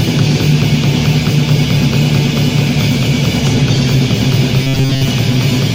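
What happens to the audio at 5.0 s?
At 5.0 s the sound has turned into a rigid, metallic buzz pitched at 134 Hz, which still loosely follows the original contour. This is robotic sound from repeated short buffers, running from 4.63 to 5.08 s. The likely cause is new audio arriving too seldom, so the playback keeps repeating a tiny chunk of about 7.5 ms, which sets that fixed 134 Hz pitch. Most of the real audio in that stretch is skipped.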